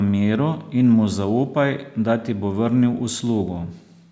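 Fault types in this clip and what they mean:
Nothing stood out on listening to this speech; the call microphone processing shows only in the missing lowest bass and the absence of content above 8 kHz.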